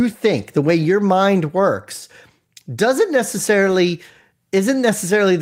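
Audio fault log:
3.67–3.73 s, lost packet rebuilt from error correction: a brief rough, noisier patch in the speech with no dropout. It fits two lost 20 ms packets, each replaced by the low-bitrate backup copy carried in the following packet, so the gap is filled but at reduced fidelity.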